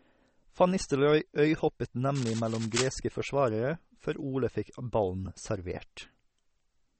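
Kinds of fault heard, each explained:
MP3 compression: The speech sounds watery and swirly throughout, with nothing above about 8.4 kHz, so s sounds lose their top and come through dull and chirpy, and word onsets smear. This is likely heavy MP3 coding at a low bitrate, around 32 kbps. Short of bits, the encoder cut the treble at a fixed point and kept dropping weaker frequency components, switching them in and out from frame to frame.
Cable scratch noise: From 2.15 to 2.90 s a dense, uneven scratching and rustling sits over the speech, about 10 dB below it. The likely cause is a worn cable, connector or control being moved during recording. Its contact resistance jumped around rapidly, injecting irregular bursts of noise into the signal for those three-quarters of a second.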